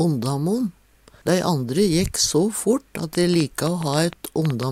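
A train of clicks runs from 3.15 to 4.64 s. About ten sharp pops arrive at an uneven pace, roughly six per second. They peak about 10 dB above the sound. The likely cause is interference from nearby equipment or a faulty connection or power supply.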